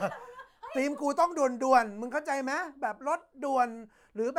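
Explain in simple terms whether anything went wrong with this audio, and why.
Nothing went wrong with this recording of speech. No faults can be heard anywhere in it.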